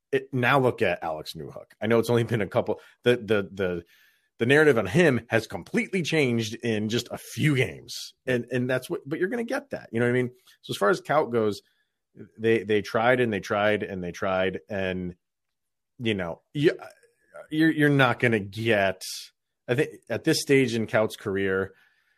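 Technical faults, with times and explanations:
No technical faults are audible anywhere in this speech recording.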